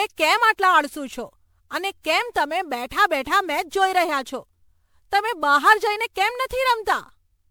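Repeated MP3 encoding at around 128 kbit/s, likely some ten passes, is the probable source of generation loss running through the whole clip. Each decode and re-encode quantised the signal again on a shifted frame grid, so noise and spectral gaps piled up. The speech sounds swirly, smeared and hollow beyond what one pass at that bitrate would give, consonant attacks are blurred, and nothing remains above 20.7 kHz.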